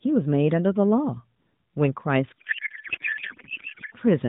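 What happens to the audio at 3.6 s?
A codec payload misread runs from 2.39 to 3.95 s: octet-aligned AMR frames are decoded as bandwidth-efficient, misplacing every field, so the speech turns into garbled warbling noise.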